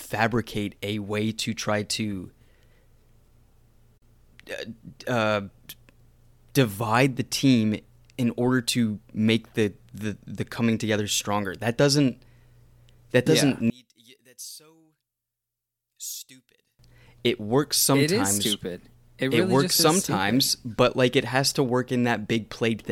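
Speech that, from 13.7 to 16.79 s just after "that doesn't yeah", drops about 21 dB and turns faint, the centred voice nearly gone. The likely cause is one channel inverted: with reversed polarity, the shared signal cancels in a mono sum, leaving only the channel difference.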